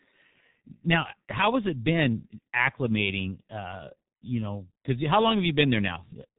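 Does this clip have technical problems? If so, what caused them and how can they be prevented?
Yes. G.723.1 codec damage runs throughout the speech, and it is heavy. Everything above about 3.8 kHz is gone, so the voice sounds muffled and hoarse and consonants smear together. The codec rebuilds speech from a coarse voice model refreshed only once per 30 ms frame, which is what blurs quick sounds. The sound points to a rate near 6 kbit/s. To prevent this, record or transmit with a wideband codec at a higher bitrate instead of G.723.1.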